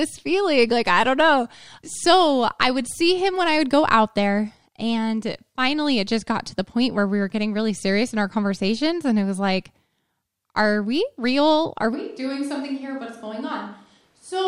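At 11.96 s the speech turns hollow and roomy, loses bass, and drops by roughly 10 dB. The room noise rises to around 35 dB below the speech, and the change lasts to the end. The likely cause is a switch to a distant microphone, after the close microphone's signal was lost. A simple gain drop would keep the same tone. Here the sudden change in tone, reverberance and noise points to a different pickup position.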